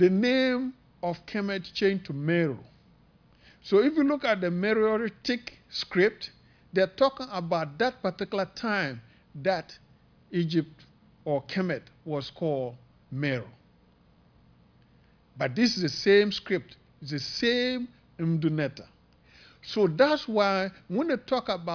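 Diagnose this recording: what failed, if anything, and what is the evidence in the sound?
Nothing failed at any stage from capture through playback, and nothing in the sound gives evidence of a fault.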